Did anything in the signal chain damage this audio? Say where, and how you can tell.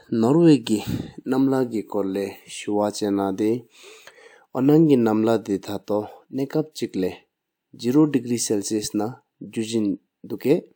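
No, nothing in this speech recording stood out on listening as damage from any stage of the signal chain.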